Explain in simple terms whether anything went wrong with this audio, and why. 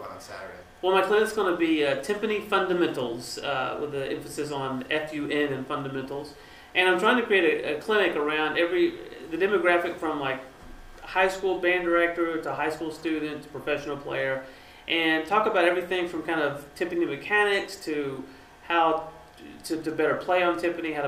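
Nothing went wrong here: the signal stays steady and intact the whole way, with no sign of any technical problem.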